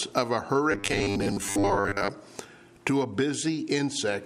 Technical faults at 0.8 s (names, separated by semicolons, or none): robotic sound from repeated short buffers